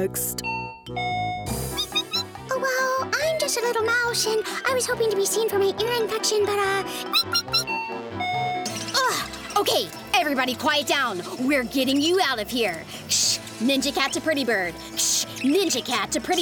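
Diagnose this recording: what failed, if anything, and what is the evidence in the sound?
The converter failed, with sample clock jitter from 7.32 s to the end. A fine hiss and roughness ride on the sound there. It swells on loud, bright passages and vanishes in quiet gaps. The unstable clock shifts sampling instants by around a microsecond or two. Errors follow waveform slope, sitting roughly 30 dB below the signal.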